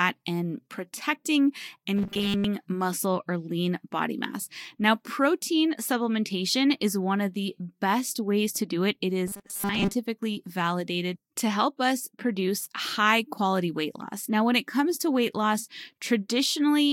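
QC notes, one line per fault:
1.96–2.44 s and 9.27–9.95 s: robotic sound from repeated short buffers. Speech turns into a rigid metallic buzz at 200 Hz, with most of the audio replaced by repeats. The likely cause is a 5 ms chunk looping while real audio is skipped. A spectrogram shows evenly spaced 200 Hz harmonic bands, and the waveform shows identical 5 ms cycles.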